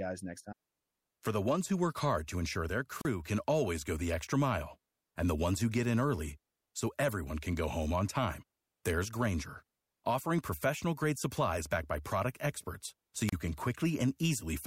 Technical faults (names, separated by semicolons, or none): wireless microphone squelch dropout